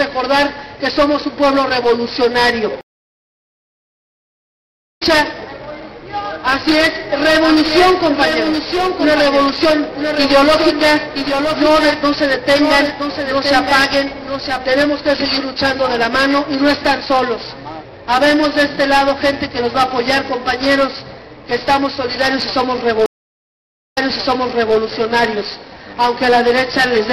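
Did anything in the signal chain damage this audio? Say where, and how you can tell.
Yes. Two stream reconnects at the network stage: at 2.81 s the waveform flatlines for 2.15 s and resumes roughly two seconds further on, skipping material. At 23.06 s a 0.88 s gap ends with 0.84 s replayed. Each restart fades in from a fresh decoder.

From 7.05 to 14.65 s a doubled audio track appears. A full-band copy about 5 dB down trails by roughly a second, with no reverb tail, and it starts and stops abruptly. On a spectrogram every pattern repeats one second later, likely from a second, slower capture path.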